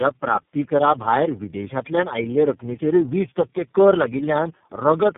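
Throughout the speech, tandem speech coding is audible: the signal was decoded and re-encoded across about four low-rate speech codecs, fitting GSM full rate, AMR-NB and iLBC links, with each pass compounding the last. The result sounds rough, muffled and warbly, with nothing above 3.5 kHz.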